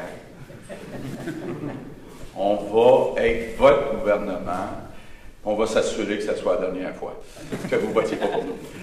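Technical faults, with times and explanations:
1.15–1.20 s, one channel drops out: the level dips abruptly by about 6 dB for 50 ms. Likely one stereo channel vanished briefly before the mono sum.
6.89–8.82 s, time-stretched section: the pace jumps to 1.54 times faster while pitch holds. It sounds rushed, likely from dropped short pieces.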